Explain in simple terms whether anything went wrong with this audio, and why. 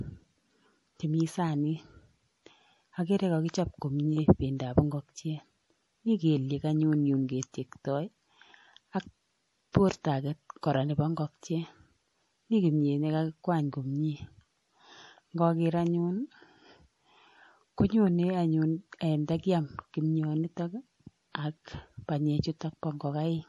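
The speech sounds watery and swirly from start to finish, with nothing above 11.5 kHz. The likely cause is heavy MP3 compression discarding detail to save space.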